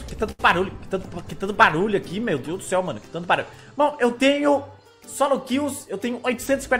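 From 0.31 to 0.41 s there is a short stall from a late packet. The receiver stretched the last sound for 75 ms. Nothing is lost, but it drags.

From 5.94 to 6.76 s comes a jitter buffer speed-up. The buffer had grown too full. Small pitch-period pieces were removed, about 50 ms in total. The sound runs 6% faster at the same pitch and feels hurried.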